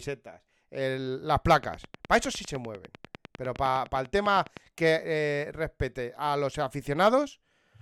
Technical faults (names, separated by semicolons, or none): train of clicks